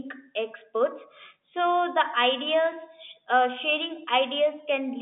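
Nothing in this speech recording stood out as a technical problem on listening, and the narrow telephone band it comes through is simply the normal character of a G.711 line.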